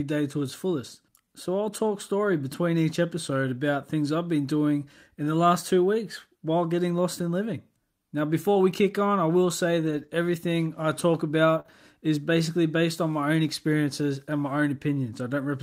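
Between 8.53 and 11.70 s, just before "is basically based on", scattered short gaps appear. Around three brief losses, the longest near 50 ms, were patched by extending the preceding sound. Each shows as a quick tick, smear or hiccup.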